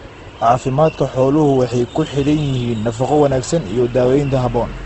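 From start to finish the speech sounds rough and grainy, with a noisy texture in place of clean detail, and nothing reaches above about 8.3 kHz, so the top end is missing. This is likely Opus compression in its music (CELT) mode at a low rate, which fits around 16 kbps. Short of bits, it fills bands with folded or noise-like content instead of leaving gaps, and narrows the bandwidth to wideband.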